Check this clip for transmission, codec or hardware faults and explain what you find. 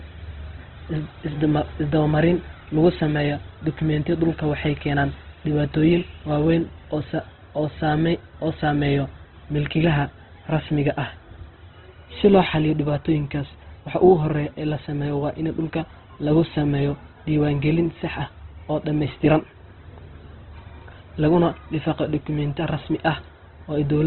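One fault is present for the whole clip: Opus compression at a very low bitrate. Throughout the speech, the spectrum stops abruptly at about 4.1 kHz, giving a narrowband, telephone-like dullness. Within that band the sound is heavily damaged. Tones turn grainy, rough and noisy rather than swirling, because the encoder keeps each band's energy but fills starved bands with noise or folded copies of lower bands. This behaviour points to Opus's music mode running at around 12 kbps, which is likely the cause.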